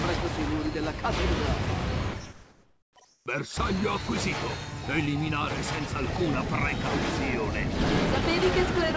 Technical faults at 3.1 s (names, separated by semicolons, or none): comfort noise in place of the background